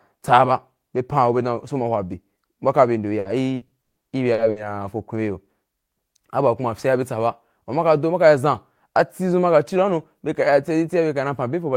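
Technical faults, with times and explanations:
3.19–4.59 s, repeated packet loss (robotic sound): six gaps, the longest 150 ms, were filled by stretching earlier sound, leaving choppy speech with pieces missing.
9.75–10.52 s, jitter buffer speed-up: the receiver trimmed about 50 ms of excess buffered audio in short pitch-period cuts, so speech runs about 6% faster at unchanged pitch.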